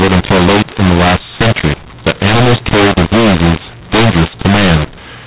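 From start to finish, mu-law and A-law are mixed up: speech coded with mu-law is decoded as A-law, so sample levels are scrambled. The telephone-band speech turns harsh and distorted, some parts too loud and others too soft, and pauses fill with noise.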